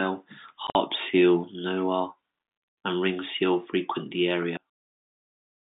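Between 0.67 and 0.75 s, just before "seal narwhal", packet loss filled with silence: a series of short packets never arrived and the receiver inserted silence for them. About 60 ms of speech drops out over 80 ms, the longest gap 50 ms, which points to roughly 10 ms packets. The holes have hard edges.

From 4.57 s to the end, right after "ringed seal frequent the", the level falls by about 38 dB, most likely because one channel was inverted and cancels its partner when the two are summed to mono. The centred speech nearly disappears, leaving only a faint residue through the narrow G.711 telephone band.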